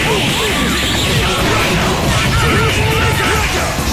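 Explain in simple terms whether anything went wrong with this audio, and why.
Nothing went wrong technically: the signal carries no audible dropouts, distortion, glitches or other defects from the recording or playback chain.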